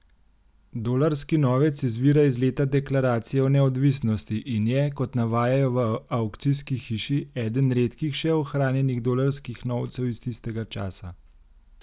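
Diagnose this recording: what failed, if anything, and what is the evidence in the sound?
Nothing failed: the speech signal stays steady and continuous through every stage of the chain, leaving nothing audible to diagnose.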